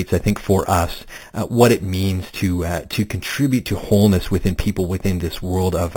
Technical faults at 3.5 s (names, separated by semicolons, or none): imaging from sample-and-hold upsampling